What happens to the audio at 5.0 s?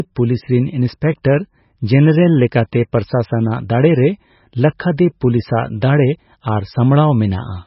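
Pre-echo at 4.97 s: a sharp attack lands late in a transform block, so quantisation noise sized for the loud onset spreads backward into the quiet moment before it. The result is a brief hiss, about 10 ms, just ahead of a softened, smeared attack.

MP3 compression runs through this moment as well, likely from a very low bitrate near 18 kbps. Nothing is left above 5.6 kHz, and weak frequency lines flicker on and off between frames. The speech sounds dull and watery, with swirly, metallic edges on s sounds.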